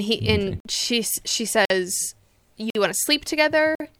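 Gaps between chunks cut 50 ms holes into the speech at 0.60–0.65, 1.65–1.70, 2.70–2.75 and 3.75–3.80 s, one per 1 s chunk, from padding or late chunk starts.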